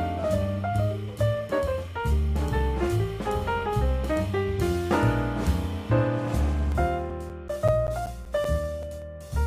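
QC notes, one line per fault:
6.72–9.02 s, CD scratch ticks: a surface blemish wipes out more data than error correction can rebuild on each disc rotation, so the player conceals the damage. This leaves 13 regular ticks, nearly six per second, the longest around 10 ms, of uneven strength.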